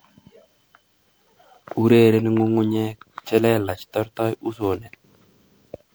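From start to finish the speech carries generation loss: a swirly, hollow, smeared quality, with consonant attacks blurred and noise built up. The damage is heavier than one pass at a moderate MP3 rate, which fits repeated re-encoding, likely around five rounds. A single low-bitrate encode would sound dull and band-limited, whereas here the artefacts compound because each pass requantises on a shifted frame grid, deepening the spectral holes.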